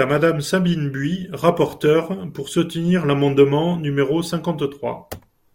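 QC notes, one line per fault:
No faults found.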